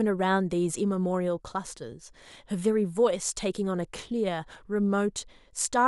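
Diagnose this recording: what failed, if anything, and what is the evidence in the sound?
Nothing failed; no stage shows any fault.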